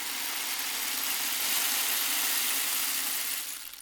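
From 3.35 s to the end at 3.82 s, a jitter buffer speed-up trims short pitch-period pieces repeatedly, about 50 ms in total, so the sound runs at 108% speed with unchanged pitch.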